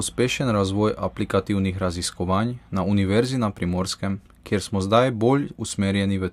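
No technical fault can be heard anywhere in the speech recording, with nothing breaking into or disturbing the signal at any point.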